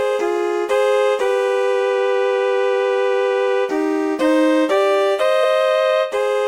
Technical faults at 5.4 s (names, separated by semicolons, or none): compressed frames skipped